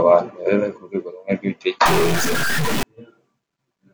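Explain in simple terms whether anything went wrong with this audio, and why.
From about 1.86 to 2.83 seconds the speech turns harsh and buzzy, and the short gaps between sounds fill with a rough hiss instead of going quiet. This is a stuck bit, likely from a faulty connection or converter that held one digit of each sample fixed, so roughly half the sample values land wrong by a sizeable amount. Unlike clipping, which roughens only the loudest moments, this fault is also audible in the quiet gaps.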